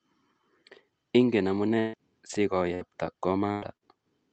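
From 1.79 s to 3.91 s the speech turns choppy and robotic as small pieces drop out and are smeared over. This is repeated packet loss: audio arrived late or not at all, again and again, and each hole was filled by stretching the last sound forward. The holes total about 340 ms, roughly 16% of that stretch, and the longest runs to 139 ms. The audio carries the limited top end of a call codec, which fits an 8 kHz bandwidth.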